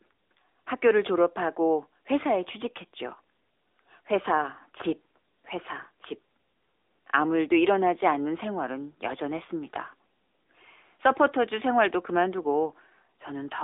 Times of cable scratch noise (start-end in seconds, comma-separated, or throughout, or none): none